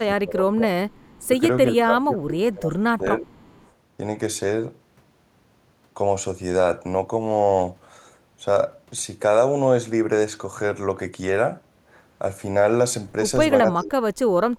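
Speech that dips in several places: from 0.0 to 0.65 s, briefly at 1.25 to 1.33 s, and again from 1.82 to 3.29 s, the level falls by around 20 dB, less at the short dip. The deepest cut comes at 13.74 to 14.17 s, roughly 40 dB down. This is likely speech suppressed in double talk: with both sides talking at once, the echo canceller could not tell this talker apart from loudspeaker echo and turned everything down. Between these dips, from 0.89 to 1.25 s and from 3.31 to 3.67 s, a faint delayed copy of the sound trails about 379 ms behind, sitting some 35 dB under the main level. This points to an echo leak, likely where the far end plays the call over a loudspeaker and its canceller let part of the microphone pickup slip back into the line.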